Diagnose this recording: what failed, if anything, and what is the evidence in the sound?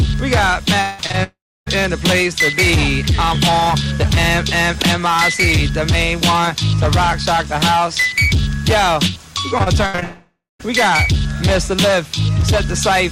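The network stage failed, most likely through a long network dropout, at 0.81–1.00 s, 1.23–1.68 s and 10.03–10.61 s. The last sound is stretched into a fading buzz, then about 0.28 s and 0.16 s of silence in the latter two. A spectrogram shows smeared, blurred harmonics decaying into a blank band.

Short concealed packet loss follows at 1.06–1.12 s and 1.12–1.15 s, covering holes of about 40 ms and 20 ms. The decoder extrapolates the preceding waveform and crossfades back, giving a brief smear or wobble. On the waveform these appear as unnaturally smooth, periodic-looking patches.

Repeated packet loss makes the sound choppy from 9.58 to 10.03 s: five gaps, the longest 75 ms, with about a third of that span synthesised. The spectrogram shows comb-like, stuttering striations that run straight into the dropout at 10.03 s.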